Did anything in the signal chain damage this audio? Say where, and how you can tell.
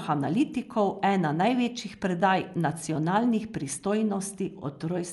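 Yes, at the codec stage, throughout the speech. Nothing reaches above 11.5 kHz, so the sound is dull, and a rough, fluttering noise clings to voiced tones. This is likely Dolby Digital compression at a low bitrate, which fits roughly 64 kbps. The encoder narrows the band and starves many frequency lines of bits, and the decoder fills those lines with noise. A plain low-pass filter would dull the sound without that grainy flutter.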